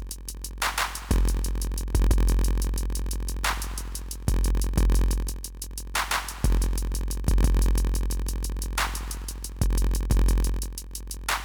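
Throughout the clip there is a block size mismatch (padded). Each block arrives short and is filled out with silence. That gap produces a steady 43.1 Hz buzz, which fits a 1024-sample read block. Playback runs at 0.938 speed, with the timbre unchanged.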